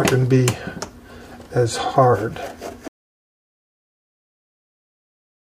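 At 2.88 s the audio drops out to silence and stays silent to the end. The sound cuts off abruptly, mid-flow. No room tone or background hiss remains in the gap, just dead silence. Whatever was happening after that point is gone. The input was likely lost, through a disconnected device, a failed link or a stray mute, while the recorder kept writing silence.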